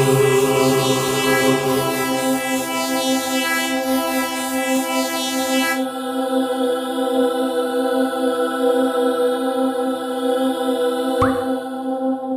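No technical faults can be heard anywhere in the recording.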